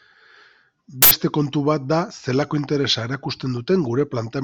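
At 1.02 s a short, loud burst of harsh digital noise cuts in for about 85 ms, ending at 1.11 s just before "kontu bat da". This is an uninitialised buffer: a block, which fits 4096 samples, played before any audio was written into it, so leftover memory came out as sound.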